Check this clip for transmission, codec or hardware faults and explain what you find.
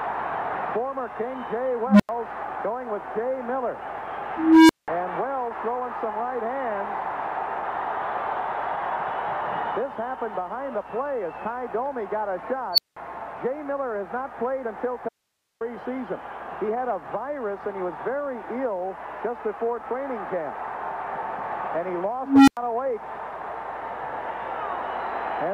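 Two kinds of fault are present. An unstable filter and an audio dropout to a faint residue both occur.

Unstable filter at 1.87–2.09 s, 4.37–4.88 s, 12.73–12.97 s and 22.23–22.57 s. A recursive filter runs away. Its tone swells over 54–326 ms, clips, and then cuts to silence for 93–186 ms. The tone sits near 200 Hz, 300 Hz, 5 kHz and 300 Hz.

Audio dropout to a faint residue at 15.09–15.61 s. The signal vanishes abruptly for 518 ms, leaving only hiss about 50 dB down. This is likely a live path after a break.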